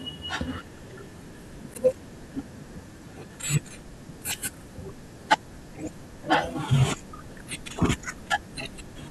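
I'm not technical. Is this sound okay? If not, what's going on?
No, there's one glitch. At 1.74 s the speech briefly drops out to a block of digital silence, about 11 ms of pure nothing, which fits a 512-sample buffer the computer didn't fill in time. The sudden cut and return make a small tick.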